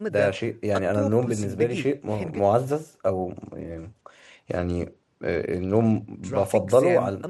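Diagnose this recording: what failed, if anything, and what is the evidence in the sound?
A Bluetooth SBC bit pool drop hit the codec stage from 3.44 to 6.54 s. The treble dulls and gritty noise rises, which fits a bit pool cut from 28 to 11.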